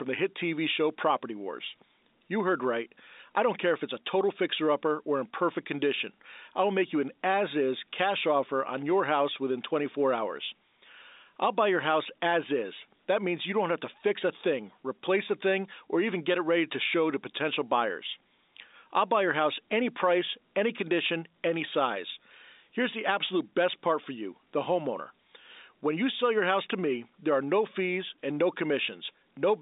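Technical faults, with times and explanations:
Careful listening turned up nothing that stood out in this speech, which carries the narrow band of an ordinary telephone line.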